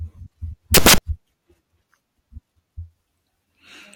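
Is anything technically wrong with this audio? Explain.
Yes. From 0.74 to 0.98 s, the samples are built from the wrong bytes. For about a quarter of a second, the reader combines each sample's bytes incorrectly, whether by a one-byte offset, reversed byte order, or a mismatched alignment, so the rapidly fluctuating low-order bits end up as the most significant part of every value. The speech in that stretch is replaced by a burst of loud, harsh broadband noise.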